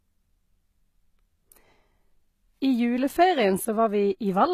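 From start to end, the speech carries plainly audible HE-AAC compression damage, likely from a low-bitrate encode, and the sound points to something near 20 kbps. The upper spectrum is rebuilt by copying lower bands upward, so s sounds come out gritty and metallic, with harmonics that fail to line up above the crossover. On a spectrogram the treble shows blocky, repeated texture under a coarse envelope, and nothing appears above 14.9 kHz.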